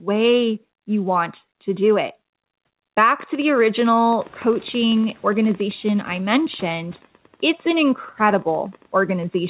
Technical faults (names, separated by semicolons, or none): noise suppressor catching up